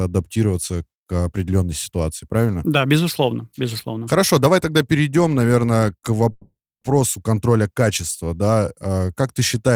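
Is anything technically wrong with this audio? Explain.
Yes, there is a call audio freeze from 6.31 to 6.84 s. The speech halts and the last sound drags on as a fading buzz, then about 290 ms of silence, before resuming with nothing lost, only pushed about 500 ms later. The likely cause is delayed packets draining the jitter buffer. On a spectrogram, smeared horizontal bands taper into a blank gap. The waveform shows a decaying envelope, then a flat line.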